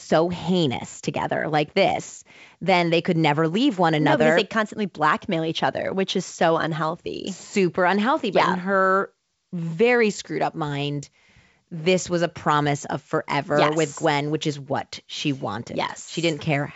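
No faults; the speech is carried over G.722 wideband telephone coding at 64 kbit/s, with nothing above 7.7 kHz.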